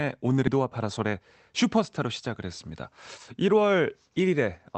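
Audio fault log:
0.47 to 0.49 s, skip ahead: playback jumps forward with no gap filled, dropping roughly a second of speech while later audio was already queued. The waveform shows two unrelated segments butted together, and the spectrogram shows an abrupt change in harmonic pattern with no silence between.
0.57 to 1.27 s, jitter buffer speed-up: the receiver cuts out short pitch-period slices repeatedly, removing about 100 ms in total, so the speech runs at 112% speed at unchanged pitch and sounds hurried. The spectrogram shows harmonics at the usual spacing but compressed syllables, and seams in the waveform where cycles were spliced. The Opus-coded band stops near 8 kHz throughout.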